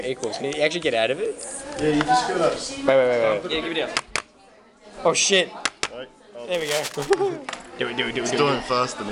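From 6.54 to 7.10 s, cable scratch noise appears. Dense, uneven rustling sits roughly 10 dB below the sound. A worn connector being moved is the likely cause.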